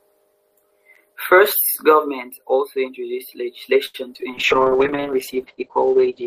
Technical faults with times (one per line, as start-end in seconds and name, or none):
3.85-3.96 short stall from a late packet
4.14-4.23 short concealed packet loss
4.33-6.26 call bitrate drop